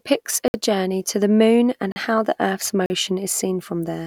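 At 0.48 s the speech drops into a block of digital silence for 60 ms, just before "journey to the moon", and two more follow: 1.92 s (40 ms), between "to the moon and" and "how the earth's", and 2.86 s (40 ms), after "and how the earth's". Samples were zeroed, which points to a buffer not filled in time. The cut is abrupt, unlike a dropout that fades.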